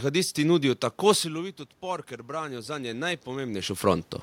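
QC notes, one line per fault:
1.19–3.89 s, automatic gain rising: after "nudijo tako" the input drops by about 14 dB as the talker moves back, and the gain control slowly adds about 5 dB over nearly three seconds, so voice and room noise swell together.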